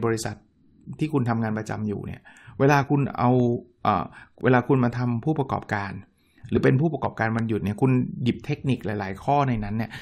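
From 3.40 s to 7.39 s, a tick recurs once a second, about five times in all. These are periodic USB or driver dropouts. Something repeatedly stalls the audio path, and each time roughly a millisecond of the speech is lost and filled with silence. The tiny gap leaves a hard, sharp click. What marks it as a driver problem rather than a damaged file is the strict one-second spacing of the ticks.

At 6.56 s the speech lurches forward, because compressed frames were skipped. Those frames never reached the output, so roughly 20 ms of audio is simply absent and the sound resumes further along. Unlike the dropouts, it happens once, off the one-second grid, and content is missing rather than silenced.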